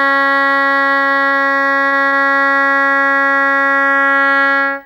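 A low buzz with fine hash riding above it runs under the music from start to finish, faint and well below the music, along with a thin, very high whine at 15.6 kHz. This is video or display buzz: a screen or video cable is coupling into the audio path, so the buzz pulses at the 50 Hz picture field rate and the whine sits at the horizontal line rate of the scanned image.

At 1.27 to 1.34 s, 1.87 to 1.95 s and 2.08 to 2.15 s the music briefly smears and wobbles, as if a sliver of it were held and stretched before snapping back. These are short concealed packet losses. About 40 ms of audio failed to reach the decoder in time on each occasion, and the receiver filled each gap by extending the preceding sound before crossfading back into the real signal.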